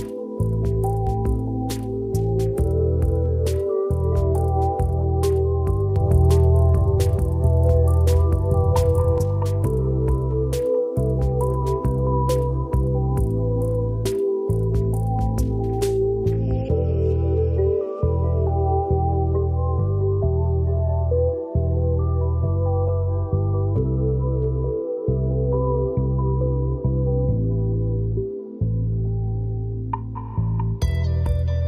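From 5.96 to 9.18 s there's a doubled audio track: a second, equally loud copy of the sound trails about a second behind, dry and full-band, switching on and off abruptly. Likely a slower second capture path or an edit leaving two copies out of step.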